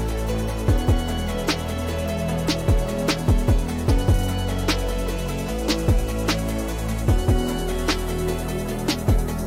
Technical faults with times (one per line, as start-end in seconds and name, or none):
none